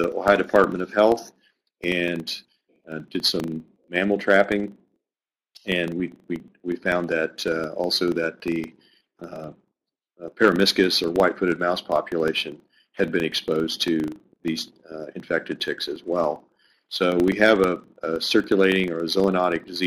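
Running through the whole clip is a buzz at 25 Hz, the sign of a filter restarted on every block. The filter drops its memory at each block boundary and starts again from silence, so every 40 ms the sound gets a small transient that grows louder and quieter with the signal. On a waveform these show as tiny regular spikes 40 ms apart. A spectrogram shows faint vertical striations at that spacing and a comb of lines at multiples of 25 Hz.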